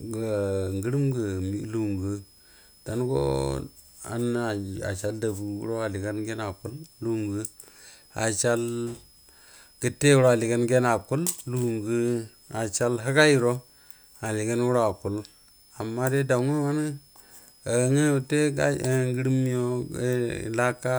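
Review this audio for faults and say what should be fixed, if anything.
Switching supply whistle, present throughout: a thin tone near 5 kHz, wandering between about 5.0 and 5.37 kHz, sits roughly 30 dB under the speech. A nearby switch-mode supply is cycling at an audible rate that shifts with its load. Powering the recording chain from a linear or well-filtered supply, and keeping switch-mode adapters away from it, would prevent this.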